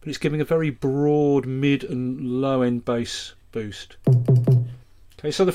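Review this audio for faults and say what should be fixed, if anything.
No faults detected; nothing needs fixing.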